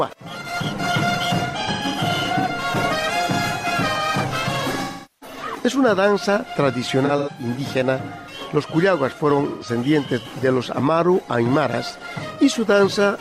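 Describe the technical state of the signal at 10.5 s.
At 10.5 s the audio is intact, with no dropout, distortion or other fault present at that moment.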